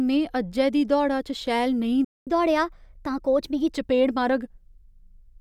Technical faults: playback stall; catch-up at higher speed

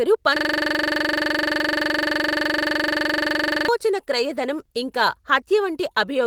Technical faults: system hang loop

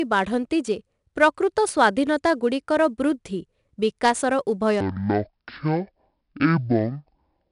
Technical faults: 4-bit ADPCM compression; section at the wrong speed

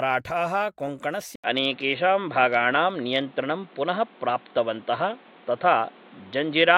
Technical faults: input switched to a poorer device

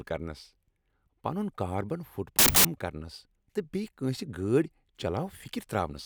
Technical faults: wrong sample width

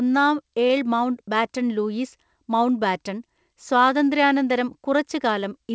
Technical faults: short stall from a late packet

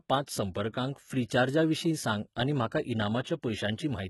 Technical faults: HE-AAC compression

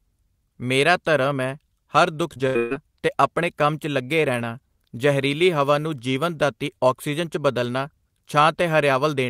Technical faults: repeated packet loss (robotic sound)

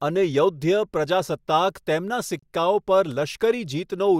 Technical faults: gap between stream segments

